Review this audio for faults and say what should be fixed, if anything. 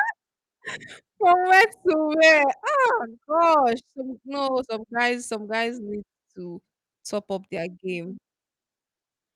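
No technical faults can be heard in this speech recording. There is nothing here that needs fixing.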